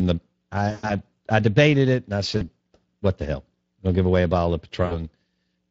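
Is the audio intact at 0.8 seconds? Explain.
No. From 0.71 to 0.93 s, about 120 ms of VoIP packet loss was concealed by the speech codec. The decoder extended its last pitch and filter with fading gain, so the sound smears into a buzzy tone or coloured noise that fades just before "I debated it and". Underneath, the Speex codec runs throughout at a setting consistent with roughly 20 kbps, and its coding leaves the speech audibly hoarse and noisy at this point too.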